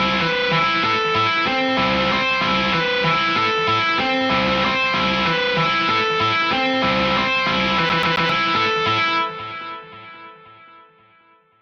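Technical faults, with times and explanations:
7.89 to 8.29 s, CD stuck on one turn: the same 0.13 s slice of sound plays three times back to back, with a brief mute at each jump, giving that quick, even stutter you'd know from a skipping disc. What's going on is a scratch knocking the laser back one track at the same spot every revolution, so it keeps rereading that short stretch instead of moving on.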